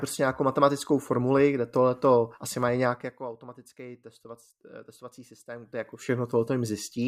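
From 2.83 to 3.33 s, zipper noise rides on the speech as its level falls by around 15 dB. The gain drops in about a hundred discrete, unsmoothed steps per second, and each jump leaves a small click, producing a rapid ticking texture across the fade.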